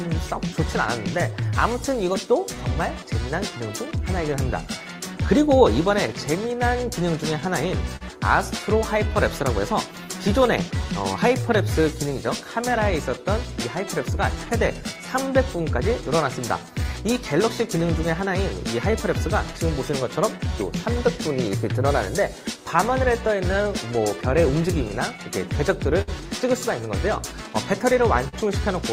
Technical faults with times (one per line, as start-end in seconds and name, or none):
0.00-28.93 clock drift between sender and receiver
0.28-28.03 repeated timing corrections
7.96-8.03 short stall from a late packet
13.89-15.60 scattered short gaps
18.68-21.24 scattered short gaps
24.88-26.10 scattered short gaps
28.28-28.35 short stall from a late packet